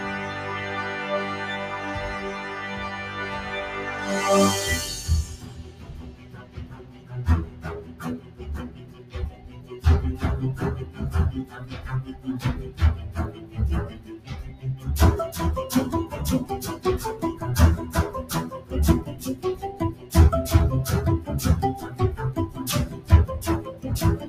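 A speech-tuned noise suppressor was left running on this material, mistaking steady content for noise, so levels pump by around 15 dB as sustained parts sink. It cut the sound hardest at 0.00–4.09, 5.34–7.12, 7.46–7.65, 7.82–8.01, 8.20–8.42, 8.68–9.14, 9.37–9.71 and 14.00–14.28 s, with held and fading sound dropping by about 7 dB (about 6 dB at 9.37 s) while sharp onsets pass.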